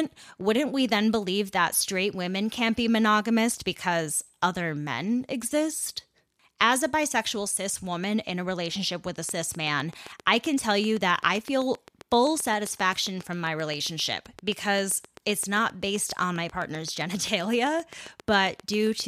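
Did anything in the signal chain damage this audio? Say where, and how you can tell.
Yes. From 9.29 to 19.01 s, after "a relationship with a", a train of clicks ticks evenly at 7.6 per second, about 5 dB above the speech, likely interference picked up in the analogue wiring.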